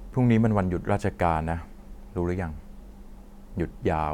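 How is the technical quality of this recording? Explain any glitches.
No technical glitches are audible.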